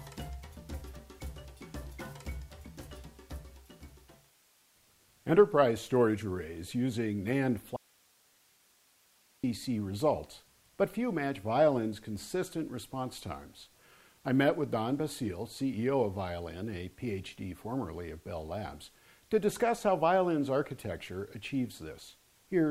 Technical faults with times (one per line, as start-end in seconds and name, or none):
7.76-9.44 audio dropout to a faint residue